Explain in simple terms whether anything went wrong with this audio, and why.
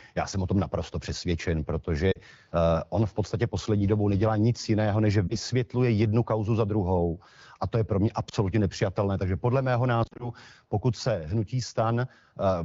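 Lost AMR speech frames cause brief glitches at 2.11–2.19 s, 5.28–5.38 s, 8.29–8.34 s and 10.03–10.30 s. Radio errors corrupted small chunks of the phone signal, so the decoder threw them away and filled each gap by repeating the last good sound while fading it down. The first gap is about 40 ms, the next two about 20 ms each, and the last is a scatter of short dropouts over about 160 ms. The single lost chunks are a quick dip or wobble, the longer runs drop to near silence, and the voice comes back weak or rough for a moment. Outside these moments, the wideband (HD Voice) codec keeps the speech clear.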